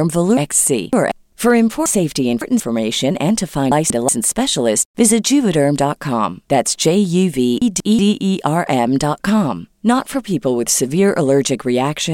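Chunks out of order occur four times: 0.37–1.12 s, 1.86–2.60 s, 3.72–4.09 s and 7.62–7.99 s. Chunks of about 186 ms play late, three chunks behind in the first two and one behind in the others. The speech jumbles.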